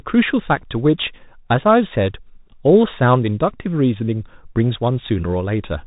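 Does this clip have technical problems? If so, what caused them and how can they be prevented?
Yes. The speech passes through a Bluetooth CVSD headset codec for its whole length. Nothing reaches above 3.8 kHz, so it sounds muffled. Each sample gets a single up-or-down bit, which fits a 64 kbps link. Loud high sounds outrun the adapting step and distort. S sounds turn scratchy over a granular hiss. To prevent this, record on a wired microphone, or use a headset that supports a wideband Bluetooth codec.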